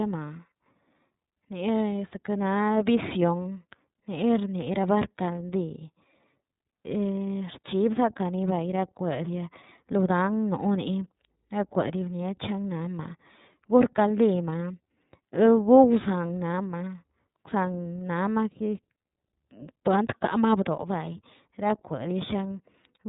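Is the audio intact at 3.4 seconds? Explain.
No. At 3.44 s a lost iLBC frame leaves the decoder with nothing to decode. It fills the hole by repeating the last pitch cycle mixed with noise. The gap lasts about 30 ms, which fits a single dropped frame. It sounds like a brief held, slightly buzzy vowel. Because each iLBC frame is decoded independently, the speech recovers cleanly right after.

The whole passage also carries the iLBC codec at 13.33 kbps with 30 ms frames. Its damage is plainly audible: everything above 4 kHz is cut away, and the excitation coding gives the speech a rough, somewhat synthetic edge.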